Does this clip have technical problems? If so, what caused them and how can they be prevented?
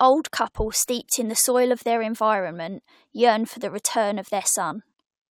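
No, no technical problems can be heard in this speech clip. With nothing to trace to a cause, there is nothing here that needs preventing.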